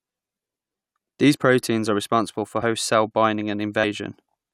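Compressed frames are skipped at 0.54, 2.61 and 3.83 s: the speech jumps ahead by roughly 40, 70 and 40 ms, fitting two or three 21.3 ms frames. Each join is visible as a short discontinuity in the waveform and a vertical smudge on the spectrogram.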